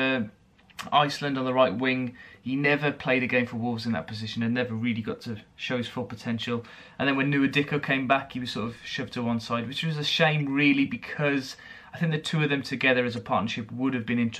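At 4.40 s, 10.40 s and 13.16 s, short blips break through the sound. Each lasts under 20 ms. They come from damaged data in a compressed stream. Corrupted bytes make the decoder misread frames and lose sync until it finds the next frame header.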